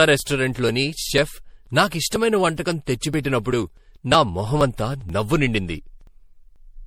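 From the start, the speech sounds swirly, smeared and hollow. Consonant attacks blur. This is generation loss. The likely cause is repeated lossy encoding, with the audio decoded and re-encoded about four times. Each pass quantised the sound again on a shifted frame grid. Noise and spectral holes built up. The character points to MP3 at around 64 kbit/s. Nothing remains above 19.5 kHz. The damage is heavier than one encode at that rate would leave.

From 0.2 s to 6.56 s there are periodic USB or driver dropouts. A short tick or pop recurs every 0.49 s, about fifteen times in all. Each time, roughly 10 ms of audio is simply skipped, not replaced with silence. A background task is stalling the bus or driver at a fixed interval. The ticks are evenly spaced and sound only while speech is present.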